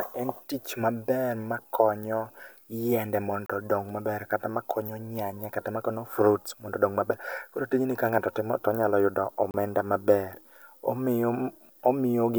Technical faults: gap between stream segments

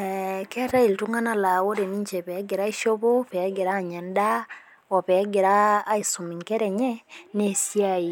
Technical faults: none

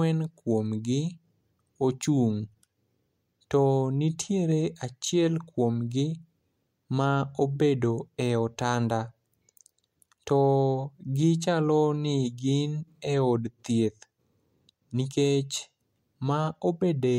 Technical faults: none

